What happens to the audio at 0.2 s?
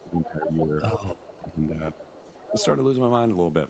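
A second voice is leaking through from 0 to 0.67 s. It sits roughly 10 dB below the main speech, likely loudspeaker echo the canceller missed. Over nearly the same span, 0.02 to 0.71 s, the speech itself is suppressed in double talk. It dips by up to around 10 dB, likely because the canceller turned both sides down while they overlapped.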